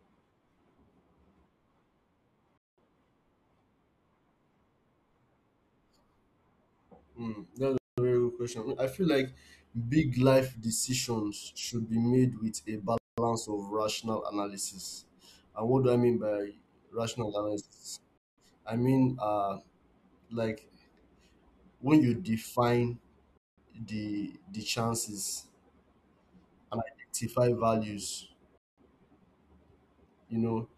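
Six gaps between chunks break up the speech, at 2.58, 7.78, 12.98, 18.18, 23.38 and 28.58 seconds. Each lasts 200 ms. They fall every 5.2 seconds, which points to 5-second chunks with a pause inserted at each join. The audio arrives in blocks. Nothing is cut away. The speech simply stops and resumes. Each hole drops to silence.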